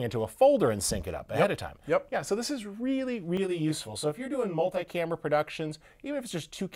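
From 3.37 to 4.84 s, channel delay (comb filtering) sets in: one channel lags by roughly 20 ms and mixes with the other, cutting evenly spaced notches from around 30 Hz upward. The sound turns rough or slightly doubled. The notches stay fixed, unlike a sweeping phaser.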